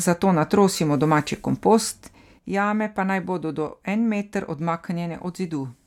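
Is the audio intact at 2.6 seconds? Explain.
No. At 2.6 s the clip is inside a sudden gain jump that begins at 2.39 s and lasts to the end: level drops by about 8 dB in one step, likely a gain change applied without a ramp. Unlike a compressor or fade, the background noise falls with the speech, instantly.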